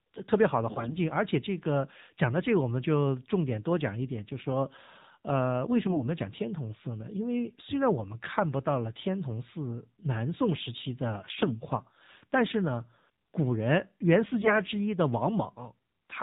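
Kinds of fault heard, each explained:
AMR narrowband mobile codec: The whole clip has gone through the old 2G/3G mobile speech coder, so everything above 4 kHz is simply gone and the speech sounds boxy and phone-like. Instead of storing the waveform, it rebuilds each 20 ms frame from a vocal-tract model fed by a handful of pulses. The damage is plainly audible here, a buzzy, synthetic edge that fits one of the lower modes, around 7.4 kbps.
AMR bit errors: Three short bursts where the link got flaky and flipped bits in the weakly protected parts of the frames, while the checksum on the important bits still passed. Around 0.72 to 0.94 s, 5.86 to 6.08 s and 14.34 to 14.60 s the speech keeps its pitch and loudness but turns hoarse, scratchy and gargly, because the excitation pulses land in the wrong spots. The first burst is the roughest, pointing to about a tenth of those bits hit.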